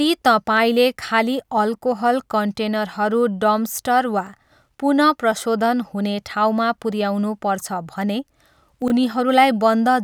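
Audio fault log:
8.82–8.90 s, chunks out of order: a brief jumbled blip in the speech. One 20 ms chunk plays three chunks late, after the ones meant to follow it, so nothing is lost, but three hard edges break the waveform.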